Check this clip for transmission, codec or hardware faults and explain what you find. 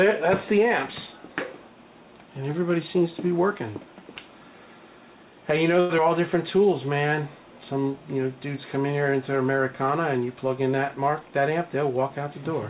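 Four transmission faults turn up between about 5.8 and 12.1 s, all from the receiving end of a call link whose audio stops at 4 kHz, which fits G.711 A-law at 64 kbps.

Short stall from a late packet, 5.80 to 5.92 s: a packet arrived late and the jitter buffer ran dry, so the receiver stretched the last sound for 96 ms before carrying on where it left off. Nothing is lost, but one sound hangs on too long.

Short concealed packet loss, 5.98 to 6.00 s: 40 ms of audio never reached the decoder in time. The receiver patched only about 5 ms by extending the previous sound, then resumed. The result is a quick smear or wobble where a brief sound can drop out.

Jitter buffer slow-down, 6.57 to 7.07 s: to rebuild its reserve, the buffer repeated tiny stretches of the signal over and over, adding 43 ms. For that half second the sound runs at 93% speed without any change in pitch, so it feels slightly drawn out.

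Jitter buffer speed-up, 11.20 to 12.14 s: with too much audio queued, the receiver trimmed short pitch-period slices repeatedly, removing around a tenth of a second in total. The sound runs at 109% speed at unchanged pitch, giving a hurried feel near the end.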